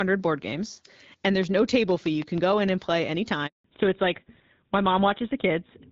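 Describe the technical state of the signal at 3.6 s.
At 3.6 s the signal is inside a handover gap running from 3.46 to 3.64 s, right after "and play". While the call moved between networks, no speech frames arrived for about 180 ms. The voice dies away quickly and leaves true silence, not the stuttering repeats or smeared fill of packet-loss concealment. Because it is one clean hole, whatever was said in that span is simply missing.

At 3.64 s, as the audio returns, a fallback to narrowband takes over for the rest of the clip. The HD Voice link at 12.65 kbit/s gives way to what sounds like a GSM full-rate codec at around 13 kbit/s, and nothing above 4 kHz survives. Sibilants and airiness disappear, leaving a duller, rougher voice. Unlike a gradual muffling or equalisation change, the bandwidth drops abruptly at the handover and never recovers.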